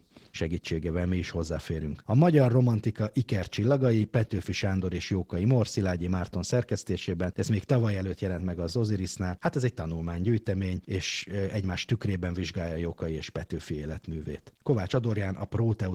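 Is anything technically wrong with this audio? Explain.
Yes, there's Opus voice compression damage running through the whole speech clip, and it's plainly audible. The speech sounds somewhat hoarse and slightly robotic, with a grainy, coarse texture. That fits Opus running at a low rate, around 16 kbps, probably in hybrid mode with 20 ms frames: SILK's linear-prediction model carries the lower band and codes the excitation roughly, while a thin CELT layer handles the top, so detail gets smeared.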